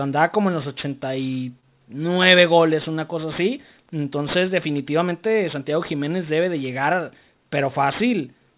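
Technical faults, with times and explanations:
Throughout, aliasing. Sibilants sound gritty and metallic, and the spectrum runs hard up to a 4 kHz edge. That fits a drop to 8 kHz sampling without a filter. Higher content folds back below 4 kHz as false tones, roughly 20 dB under the speech.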